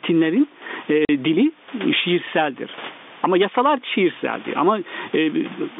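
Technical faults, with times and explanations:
Throughout, gain pumping: the level is pulled down under each loud stretch of speech, swinging by roughly 15 dB, so loud and soft parts sit squashed close together. The likely cause is gain set far too high, with a fast limiter pulling it back on every peak.
1.05 to 1.09 s, packet loss filled with silence: the speech drops out into a 40 ms hole with abrupt edges. Audio packets failed to arrive, and the receiver played dead silence for that stretch, which fits four 10 ms packets going missing together.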